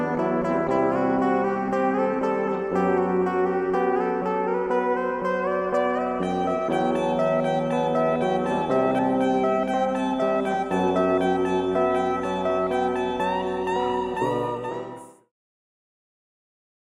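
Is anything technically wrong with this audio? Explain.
No, nothing's wrong here; the sound just eases out in a smooth fade that starts around 14 s and is finished by about 15.3 s, exactly as an editor would taper it off.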